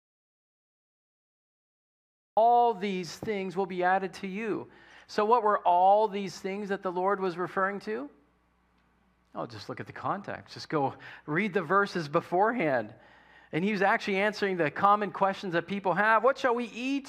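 From the very start until 2.37 s the clip is dead silent: not quiet room tone but plain silence, and the sound then enters abruptly mid-flow rather than beginning naturally. This is an audio dropout to silence already under way when the file opens. The likely cause is that the input was lost, through a disconnected device, a failed link or a mute left on, while the recorder kept writing silence. Whatever occurred in those first seconds is gone.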